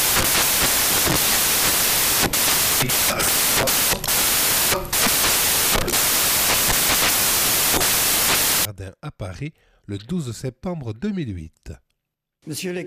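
Samples built from the wrong bytes run from the very start to 8.65 s. Each sample has been assembled from its bytes in the wrong arrangement, misaligned by a byte or with the byte order reversed, so the rapidly fluctuating low-order bits end up as the most significant part of every value. The result is a harsh, loud wash of broadband noise, close to white on the louder sounds.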